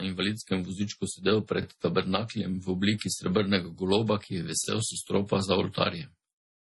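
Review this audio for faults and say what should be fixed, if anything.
Throughout the speech, the sound is watery and swirly, with chirpy s sounds and nothing above 11.5 kHz. This points to heavy MP3 compression, likely at a low bitrate around 32 kbps. Unlike a plain low-pass filter, the damage flickers from frame to frame as weak frequency lines switch on and off. Encode at a higher bitrate, or keep a lossless master for processing.

From 1.63 to 1.65 s and from 4.65 to 4.67 s, about 23 ms of audio plays twice, heard as a brief stutter. These are overlapping chunks: each 3-second chunk begins slightly before the previous one ended. A dropout would leave a gap, not a repeat. Align chunk boundaries so each chunk starts exactly where the last one finished.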